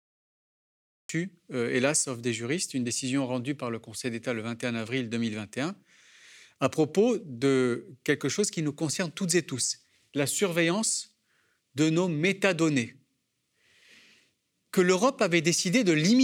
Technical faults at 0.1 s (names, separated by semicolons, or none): cut-off start